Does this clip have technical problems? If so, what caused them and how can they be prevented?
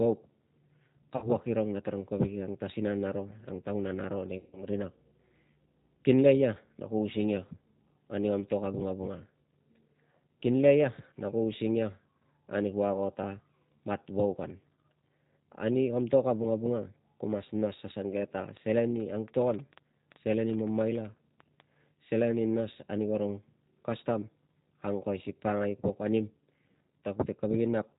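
Yes. The whole clip carries plainly audible G.729 codec damage. This 8 kbit/s codec rebuilds speech from a filter, a pitch predictor and a few pulses per frame. That makes the voice rough and synthetic, with nothing above 4 kHz. A wideband codec such as Opus would prevent it.

There is also VoIP packet loss concealed by the speech codec, at 1.16 to 1.28 s and 4.38 to 4.65 s. About 60 ms and 150 ms were lost. The decoder stretched the last sound into a fading buzzy tone or coloured noise, and the voice stays weak at the start of "irung na tarung kovek" and after "ang taunan aro nei". A steadier network path or a larger jitter buffer would prevent it.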